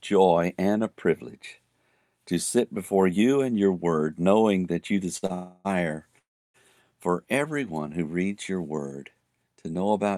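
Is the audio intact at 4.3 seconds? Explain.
Yes, at 4.3 seconds the speech plays through intact, with no audible dropout, click or distortion at that point.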